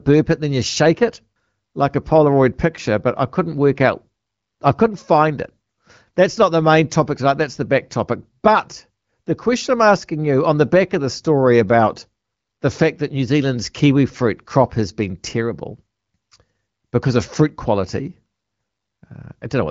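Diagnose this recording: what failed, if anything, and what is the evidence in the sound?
Nothing in the recording has failed: the speech comes through an AMR wideband (HD Voice) path whose light coding texture fits a rate of about 15.85 kbit/s, and its content stops near 7.6 kHz, as that wideband band limit implies.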